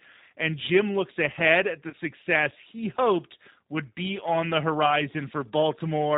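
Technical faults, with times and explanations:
Throughout, G.729 codec: speech sounds slightly rough and synthetic, with nothing above 4 kHz, from rebuilding it as a vocal tract filter, pitch predictor and sparse pulses at 8 kbit/s.
1.90 to 1.95 s, VoIP packet loss concealed by the speech codec: after "looks ahead at the", the sound stretches out and fades, consistent with about 30 ms of lost audio filled by extrapolating the last pitch and filter.
4.86 to 5.02 s, VoIP packet loss concealed by the speech codec: after "would be on the", a brief stretched smear, then weak, distorted speech as the decoder's frame-to-frame memory recovers, fitting about 10 ms lost.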